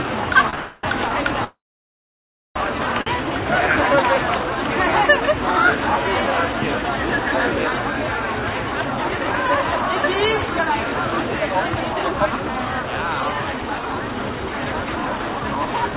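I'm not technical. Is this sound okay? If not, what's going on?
No. There are three kinds of fault in it.

Short stall from a late packet: at 0.50 s and again between 3.02 and 3.18 s, a moment of sound is held slightly too long, by about 28 ms and then about 48 ms. A piece of data arrived late, so the receiving end stretched the last bit of sound to cover the wait and then carried on from the same point. Nothing is lost, but there's a brief smeared hold.

Call audio freeze: from 0.55 to 0.85 s the sound hangs as a fading continuation for about 0.28 s. From 1.44 to 2.58 s it happens again for about 1.1 s, and most of that stretch, about a second, is silence. The likely cause is data held up in transit, with the receiver filling the wait and then resuming where it stopped. Gaps are inserted, but nothing is dropped.

Jitter buffer speed-up: from 12.97 s to the end at 15.95 s, the sound plays about 10% fast at its normal pitch. 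After the delays above, the receiver was holding extra sound. To catch up, it trimmed many tiny slices, roughly a third of a second in total, so this last stretch feels rushed.

The clip also has no content above 4 kHz, which is normal for the telephone-grade call path it went through.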